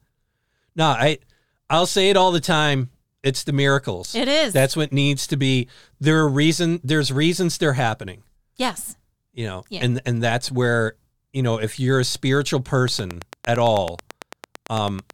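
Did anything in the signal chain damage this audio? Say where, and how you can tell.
Yes. From 12.88 s to 15.11 s a train of clicks rides over the speech: roughly twenty near-identical ticks at a steady 9 per second, peaking about 10 dB above the signal and audible in the gaps too. Because each pulse has the same shape and the pace is regular, this is likely a repeating disturbance at the analogue wiring or interface stage, such as interference from nearby equipment or a faulty connection or power supply.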